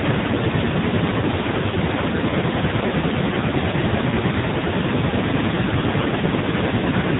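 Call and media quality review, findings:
AMR narrowband mobile codec, throughout: band-limited to 4 kHz, heavily buzzy, synthetic speech. Points to AMR-NB in a low mode, around 5.9 kbps, where too few excitation pulses per subframe reach the vocal-tract model.

Lost AMR speech frames, 6.00 to 6.07 s: brief dip and warble lasting about 70 ms, consistent with two dropped 20 ms frames. The decoder concealed the gap by repeating the last good pitch and filter settings with decaying gain, then resumed weak or rough.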